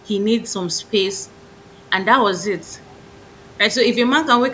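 No faults detected; the speech carries the expected signature of call microphone processing, with the lowest bass trimmed and nothing above 8 kHz.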